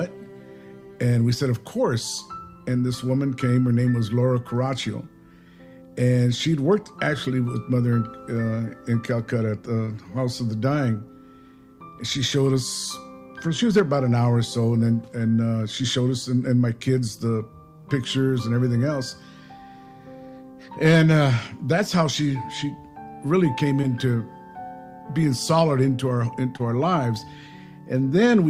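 At 9.85 to 9.89 s, 23.81 to 23.85 s and 26.57 to 26.61 s there are three instances of short concealed packet loss. In each, about 20 ms of audio, which fits a single lost packet, arrived too late for the decoder. The receiver extended the preceding sound to cover the gap, for 19, 14 and 26 ms respectively, then crossfaded back into the real signal, leaving a brief smear or wobble at each point.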